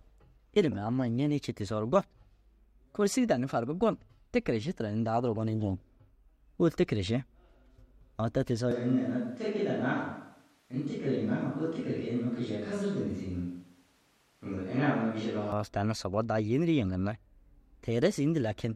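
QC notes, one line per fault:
8.71–15.52 s, switch to a distant microphone: the speech abruptly turns roomy and hollow, thinner in the bass and about 5 dB quieter, with room noise around 35 dB below it, then snaps back. Likely the close microphone dropped out, leaving only a farther pickup.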